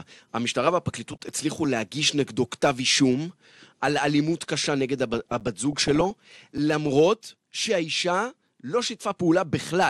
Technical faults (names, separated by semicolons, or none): MP2 compression; DAB burbling; block of digital silence